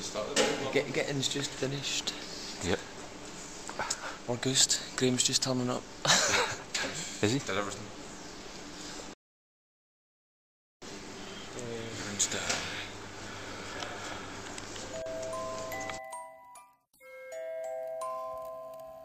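At 9.14 s the sound cuts to silence, and it picks up again at 10.82 s. This is a rebuffering stall. The player ran out of downloaded audio and waited for more. Playback resumes exactly where it stopped. Nothing is lost, but about 1.7 s of dead air is added.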